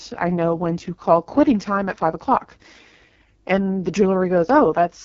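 From start to finish the speech carries AMR wideband (HD Voice) codec damage, and it's heavy: rough, raspy texture that fits the codec's lowest rate, around 6.6 kbit/s. The vocal tract model is starved of bits, and nothing survives above about 7.3 kHz.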